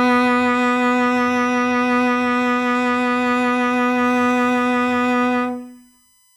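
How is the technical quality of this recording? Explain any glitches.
The music carries one fault, a USB whine. From 4.07 s to the end, a fixed 1 kHz tone sits about 35 dB below the music. Its strongest component is the 17 kHz harmonic. The 1 ms USB frame current leaks in through power or ground.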